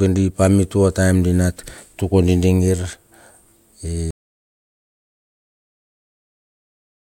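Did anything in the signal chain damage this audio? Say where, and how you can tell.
Yes. An audio dropout to silence begins at 4.1 s and runs to the end of the speech. The waveform drops to a flat, silent line and the spectrogram goes fully blank, with no room tone. The likely cause is input lost at the device or link while recording continued writing silence.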